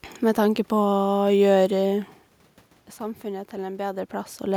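No technical faults can be heard anywhere in it.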